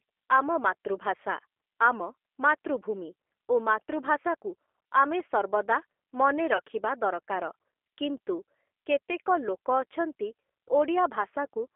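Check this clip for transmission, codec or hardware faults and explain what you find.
Two things stand out: a low-rate speech codec colouring the whole clip, and one brief packet dropout.

The G.729 codec character is there from start to finish. The speech sits in a narrow telephone band, roughly 300 Hz to 3.4 kHz, with nothing up top, and it has that plainly audible rough, slightly synthetic edge. The model rebuilds the voice from a vocal tract filter, a pitch predictor and a handful of pulses per frame, which fits an 8 kbit/s G.729A-style coder.

Around 6.57 to 6.61 s there's VoIP packet loss concealed by the speech codec. About 20 ms of audio went missing, which fits a single lost packet. The decoder filled the hole by carrying its last pitch and filter forward at falling gain, so the sound is stretched into a short buzzy tone or coloured noise that fades. Because each frame leans on the one before, it takes a moment past the gap before the voice fully firms up again.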